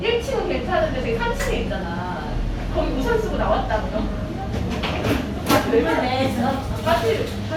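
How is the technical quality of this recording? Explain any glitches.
The recording's technical quality is sound, with no audible glitches anywhere in the signal.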